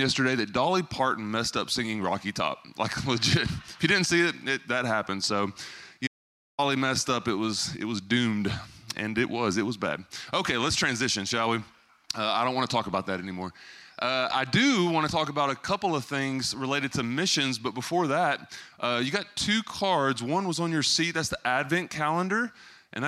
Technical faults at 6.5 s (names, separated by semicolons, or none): audio dropout to silence